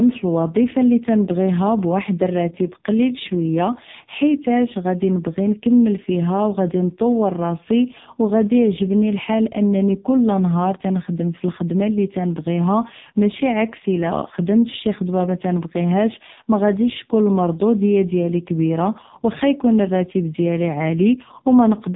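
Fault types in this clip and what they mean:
AMR narrowband mobile codec: The speech has been squeezed through the 2G/3G mobile speech coder. It samples at 8 kHz and rebuilds the voice from a vocal-tract model fed by sparse pulses, so nothing above 4 kHz survives. The damage here is heavy: voicing turns buzzy and synthetic, which fits one of the lowest modes, near 5 kbps. A plain telephone low-pass would only dull the sound. This codec also makes the voice sound artificial.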